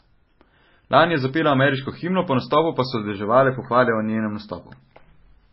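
Throughout the speech, heavy MP3 compression damage is audible, likely from an encoder starved of bits. Nothing remains above 5.6 kHz, and sibilants sound watery and chirpy as weak frequency lines flicker between frames. This points to a bitrate near 18 kbps.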